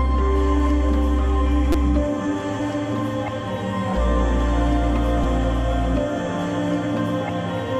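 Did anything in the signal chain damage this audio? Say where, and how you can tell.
Yes, a repeated buffer at the driver stage: a tiny buzzy stutter at 1.72 to 1.75 s and at 5.24 s, one 5.8 ms chunk replayed, which fits a 256-sample buffer.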